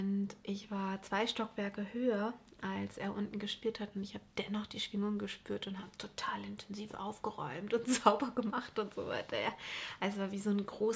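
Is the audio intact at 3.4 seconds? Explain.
Yes, the audio is intact at 3.4 seconds, with no dropout, click, distortion or other fault at that point.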